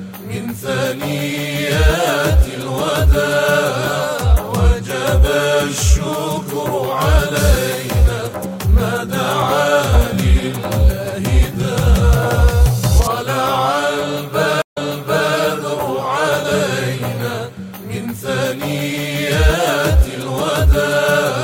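At 14.62 s the audio drops out for about 143 ms, then resumes roughly 0.6 s earlier, so a short stretch repeats through 15.36 s. This is a stream reconnect: the connection broke, and a fresh decoder restarted from a resent burst.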